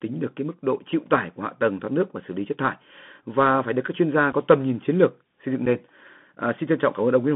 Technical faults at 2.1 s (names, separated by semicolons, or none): Bluetooth CVSD headset codec